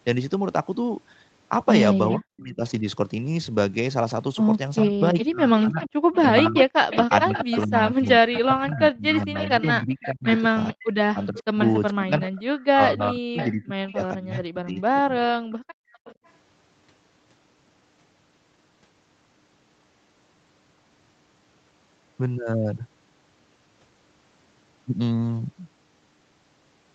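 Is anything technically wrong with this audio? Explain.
Yes, three kinds of echo-canceller fault appear in this speech.

Echo leak at 2.09–2.15 s, 4.79–12.65 s, 13.37–13.49 s and 15.5–16.31 s: a delayed copy of the speech, about 0.41–0.43 s late, at about 10 to 25 dB below the speech. The likely cause is a far-end loudspeaker whose echo canceller let residue back down the line. On a spectrogram it shows as weak, smeared repeats of the harmonic patterns, shifted right by that delay.

Speech suppressed in double talk at 2.16–2.85 s, 4.85–12.14 s and 12.73–15.12 s: while both sides talk, the speech dips by up to about 40 dB (about 35 dB in the last stretch). In total roughly half a second, four seconds and a second and a half are hit. The canceller likely mistook the talker for echo. The waveform envelope shows sudden holes, and on the spectrogram the upper harmonics vanish.

Background gated by the echo canceller at 15.4–15.93 s: the room sound drops by about 36 dB for roughly half a second while the loudspeaker plays, then returns when the canceller releases. 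The waveform shows a near-flat gap in the noise floor, and the spectrogram goes dark across all bands up to the 8 kHz ceiling the Opus call path sets.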